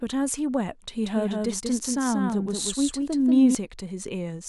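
A doubled audio track runs from 1.05 to 3.55 s: the speech is heard twice, with a second copy trailing about a fifth of a second behind and somewhat quieter. That copy is full-band and dry, switching on and off abruptly, likely from a slower second capture path.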